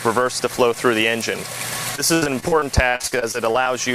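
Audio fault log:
1.95–3.68 s, repeated packet loss (robotic sound): fourteen short holes follow one another, the longest about 76 ms, and together they cover about a quarter of this stretch. Each hole is patched by carrying the last bit of sound forward, so the passage turns choppy and robotic with pieces missing. A single dropout would leave one isolated gap, but here the patched holes keep recurring across nearly two seconds.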